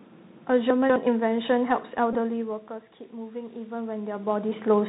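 A speech recording carried over a Bluetooth CVSD headset codec, with three separate faults on top. The CVSD damage is plainly audible throughout. Nothing above 4 kHz comes through, which fits a 64 kbit/s stream sending one up-or-down bit per sample. Under the speech lies a granular hiss, s sounds turn scratchy, and loud bright moments distort because the adaptive step cannot climb fast enough. That mix of grit and slope overload is what separates it from an ordinary low-pass, which would sound dull but clean. From 0.70 to 0.96 s the chunks play out of order: one 64 ms chunk arrives three chunks late and is played after the audio that should follow it. Nothing is missing, but the sound jumbles briefly at three hard joins. A dropout would leave a gap instead. From 2.13 to 2.16 s a Bluetooth headset packet is repeated, covering about 15 ms of lost audio, which fits four 3.75 ms packets decoded again. 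Repeating at that 3.75 ms spacing gives a short buzz near 267 Hz. That tonal buzz is what sets it apart from the talker shifting position around 2.0 s, which only changes the level. From 3.11 to 4.55 s automatic gain rises by about 4 dB, after the input fell by about 15 dB as the talker moved away, with another move around 3.5 s. The room noise swells along with the speech. That is how the gain control can be told apart from the movement itself, which changes only the voice.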